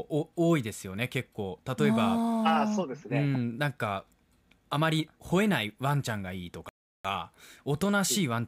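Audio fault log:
6.69 to 7.05 s, rebuffering stall: the speech just drops to dead silence for about 0.36 s, then picks up exactly where it left off. The player ran dry of downloaded audio and waited for more, so nothing's missing. You just get that extra gap.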